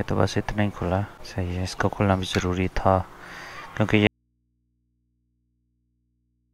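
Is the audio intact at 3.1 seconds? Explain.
Yes, the audio is intact at 3.1 seconds, with no dropout, click, distortion or other fault audible at that moment.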